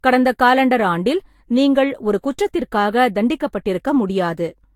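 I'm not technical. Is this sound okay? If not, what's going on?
No. The speech has likely been compressed, unpacked and compressed again about four times over, a fault called generation loss. Each round adds fresh damage, so from start to finish it sounds swirly, hollow and smeared, with word beginnings blurred.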